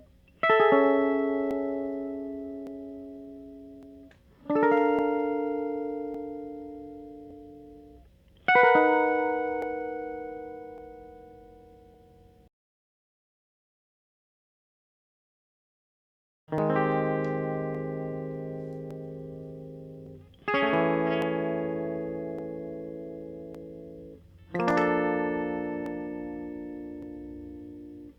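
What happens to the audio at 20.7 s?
Two devices running on slightly mismatched clocks, likely off by around 500 ppm, let the buffer between them drift until a few dozen samples are dropped or repeated. These clock drift buffer slips recur every 1.16 s from 0.35 s to the end, so 20.7 s falls within a steady series of clicks in the music.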